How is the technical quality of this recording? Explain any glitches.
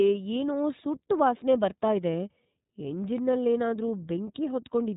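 The recording is narrowband and plainly codec-damaged throughout. This is iLBC codec coding: each 30 ms frame's excitation is coded independently, so speech sounds rough and synthetic, with nothing above 3.8 kHz. That roughness, not just the missing treble, separates it from a simple low-pass. The damage level fits iLBC's 13.33 kbps mode.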